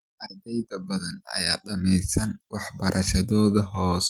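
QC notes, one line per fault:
No faults found.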